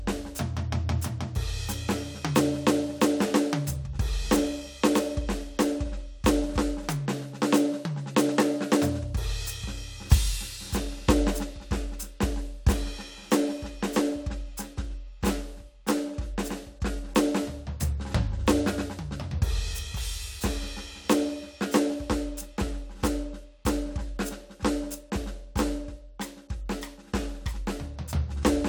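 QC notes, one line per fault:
The music signal shows no technical problems at any point in the transfer chain.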